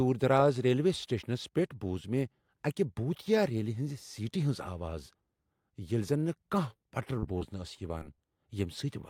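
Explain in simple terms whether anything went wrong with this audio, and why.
Short concealed packet loss: tiny pieces of the call arrived too late, so the receiver patched each gap by stretching the surrounding sound, causing brief smears or wobbles at 6.73–6.77, 7.19–7.24, 7.38–7.43, 7.99–8.03 and 8.15–8.20 seconds.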